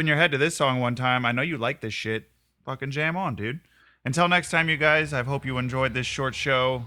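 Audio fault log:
Nothing to log here, as no faults turn up anywhere in the recording.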